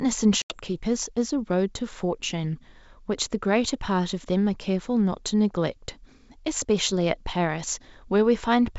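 At 0.42 to 0.56 s there's packet loss on an ADPCM call: about four packets, 80 ms, drop to hard silence, then speech returns slightly distorted while the G.722 decoder resyncs.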